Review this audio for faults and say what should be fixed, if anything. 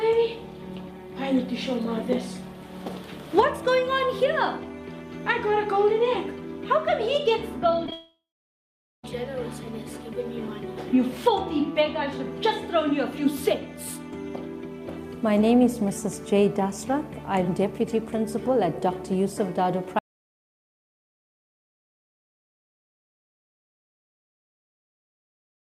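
Short concealed packet loss, around 7.86 to 7.89 s and again at 7.91 s: about 10 ms went missing each time, and the decoder patched it by continuing the previous sound, so you get a quick smear. A bit more jitter-buffer headroom or FEC would help.

Long network dropout, 7.92 to 9.04 s: over a second never arrived. Concealment carries on briefly and fades, then about 0.82 s of near-silence before the audio resumes, with that stretch lost. The likely cause is the network path, so check link stability and consider redundancy.

Audio dropout to silence, from 19.99 s to the end: everything cuts to silence with no room tone, most likely a lost input or accidental mute while recording continued. Secure cables and watch input meters.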